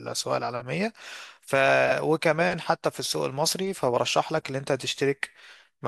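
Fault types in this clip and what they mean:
No faults are audible here.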